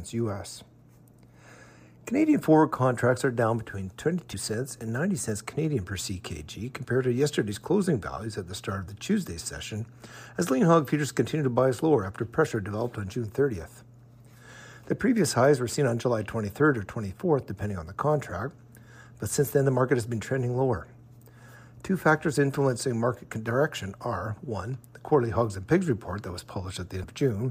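Compressed frames skipped at 4.33 s and 27.03 s: roughly 100 ms vanishes, fitting about four 26.1 ms frames, heard as a smeared blip, with a waveform discontinuity and a vertical smudge on the spectrogram.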